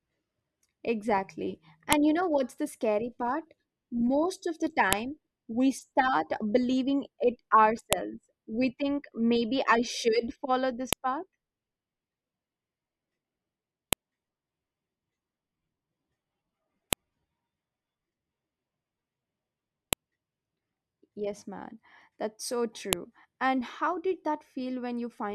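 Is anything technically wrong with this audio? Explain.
Yes. A sharp, loud click sounds at 1.93, 4.93, 7.93, 10.93, 13.93, 16.93, 19.93 and 22.93 s, every 3 s. This is a file header played as audio. Joined speech pieces kept their headers, and those bytes play as a brief burst of samples.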